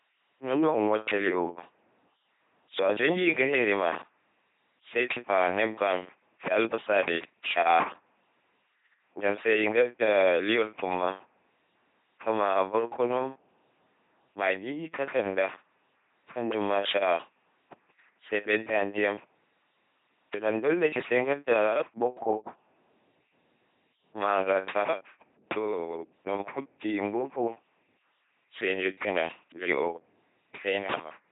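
From start to end, the speech has the sound of an LPC-10 vocoder. Each moment is rebuilt as either buzz or hiss through a simple tract filter. Voices turn robotic and mechanical. Nothing remains above 3.8 kHz. The heavy damage fits a 2.4 kbit/s stream.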